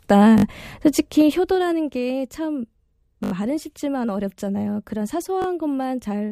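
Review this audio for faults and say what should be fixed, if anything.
Repeated buffer at 0.38 to 0.44 s, 3.24 to 3.32 s and 5.42 to 5.46 s: the playback device ran out of fresh audio and replayed the last block it held. Each repeat is 20 ms long, which fits a buffer of about that size. The block plays three extra times at the first spot, four at the second and two at the third, giving a short hard-edged stutter with a click at every join. Increasing buffering or fixing the upstream delivery so data always arrives before the device needs it would prevent this.

Zipper noise from 0.97 to 1.94 s: the level drops by about 10 dB in 2 dB jumps, about seven a second, instead of gliding. Each jump changes the waveform abruptly and leaves a small click, so a ticking rides on the speech while the level falls. Ramping the gain sample by sample, or smoothing it across each buffer, would prevent it.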